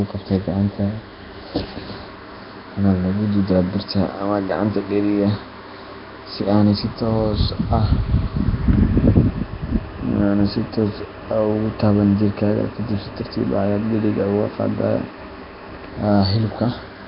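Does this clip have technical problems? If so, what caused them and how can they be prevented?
Yes. Throughout the speech there is a rough, hissy halo around every syllable and a smeared, underwater quality, with nothing audible above about 5.3 kHz. The likely cause is Nellymoser compression, the old Flash microphone codec. It codes short blocks at a fixed two bits per sample, so quiet bands get no bits and are refilled with noise. The heavy damage fits a low rate around 22 kbps. To prevent it, record with a modern codec such as Opus at a higher bitrate, or keep an uncompressed original.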